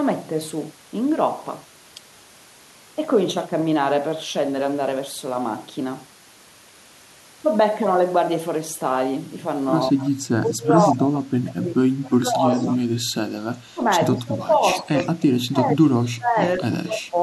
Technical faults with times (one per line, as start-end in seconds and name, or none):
9.92-12.82 speech suppressed in double talk
10.03-10.10 echo leak
10.78-10.93 echo leak
12.54-12.67 echo leak
13.74-14.92 speech suppressed in double talk
14.81-15.08 echo leak
15.50-17.16 speech suppressed in double talk
16.45-16.50 echo leak